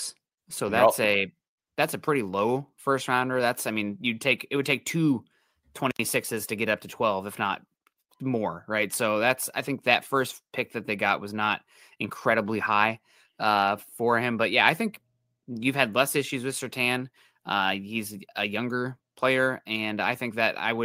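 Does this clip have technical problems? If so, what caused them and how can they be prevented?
No, nothing in this speech recording stood out as a technical problem on listening, so there is nothing to trace or prevent.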